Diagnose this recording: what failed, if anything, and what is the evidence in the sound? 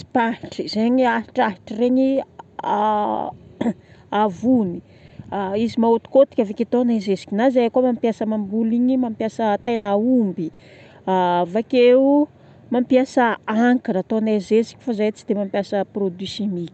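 Lost packets rebuilt from error correction at 4.43, 4.73, 4.99, 5.09, 5.13 and 5.33 s, each 20 ms, a network fault. Instead of gaps, these moments sound briefly rougher and noisier: the Opus decoder played the low-bitrate copy carried in the following packet in place of each missing one.

Short concealed packet loss at 5.07 to 5.11 s, also at the network and jitter-buffer stage. About 20 ms never arrived in time, so the decoder extended the preceding sound to cover the hole before blending back. It is heard as a quick smear or wobble.

Repeated packet loss (robotic sound) from 9.63 to 10.61 s: three gaps, the longest 100 ms, about 200 ms concealed in total, with some stretches rebuilt from error-correction copies. Successive patches of extended sound make the passage choppy. The Opus path itself passes audio up to 8 kHz.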